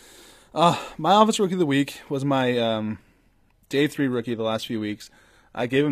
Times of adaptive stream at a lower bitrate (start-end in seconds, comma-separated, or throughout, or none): 2.42-5.92